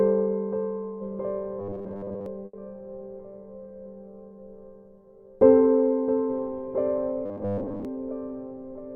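A music clip with two faults. From 1.59 to 2.26 s and again from 7.26 to 7.85 s the music takes on robotic sound from repeated short buffers: a rigid, metallic buzz fixed at 100 Hz that loosely tracks the music. The likely cause is audio arriving too seldom, so the player loops the last 10 ms or so and skips most of the real signal in between. What separates it from a dropout is that the music never stops, and the constant pitch stays locked regardless of what is playing. Shortly after, at 2.45 to 2.55 s, there is a burst of packet loss. About 80 ms of material never arrives. The receiver stretches the last sound across the gap as a fading held tone, then jumps ahead with that stretch of music gone. Unlike the buffer looping, this is a single brief concealment that decays and ends in a visible skip forward, not a sustained buzz.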